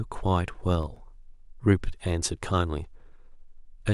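From 0.70 to 1.36 s the speech carries CD scratch ticks: six brief ticks, the longest lasting only about a millisecond, spaced at a steady rate of roughly seven or eight a second. Each marks a point where a blemish on the disc wiped out more data than error correction could rebuild, so the player patched or muted those samples. Unlike random vinyl crackle or isolated digital clicks, these recur evenly, once per disc rotation.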